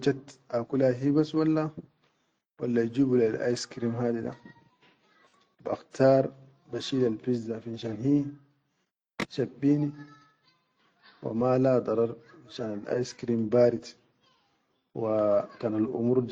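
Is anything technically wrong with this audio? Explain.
No, nothing technically wrong stood out on listening to this speech recording.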